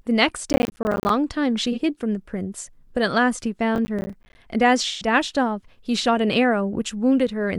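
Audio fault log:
0.50–1.10 s, processor overload crackle: the audio path repeatedly missed its deadlines for buffers of roughly 10 ms each. Each miss drops in a hard-edged gap of silence, and dozens of these in quick succession merge into a gritty crackle over the speech.
1.72–1.79 s, AAC frame loss with concealment: about 43 ms of coded audio went missing, which fits one lost AAC frame. The decoder patched the hole from the preceding spectrum, so the speech turns briefly smeared and noisy instead of dropping out.
3.75–4.35 s, processor overload crackle: the same roughly 10 ms buffers again missed their processing deadlines, each leaving a short silent hole. The misses are sparser here, so the crackle is less dense than the first burst, and it stops once the load clears.
4.87–5.07 s, AAC frame loss with concealment: 128 ms of the stream was lost, consistent with about three consecutive AAC frames. 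Concealment extrapolated from the last good frame across the whole gap, giving a longer phasey, smeared patch before clean decoding resumes.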